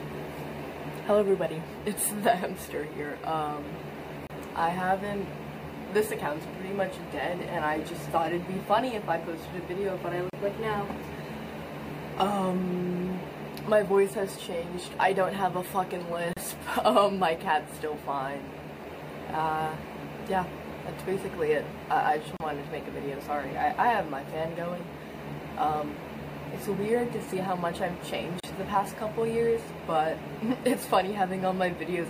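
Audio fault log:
4.27 s, 10.30 s, 16.33 s, 22.37 s, 28.40 s: gap at a join of encoded pieces, repeating every 6.0 s. The sound drops out for about 28 ms at the first join and 34 ms at the rest, then resumes where it stopped. The encoder's start-up delay and last-frame padding were left in at each join, and the codec softens the edges of each gap.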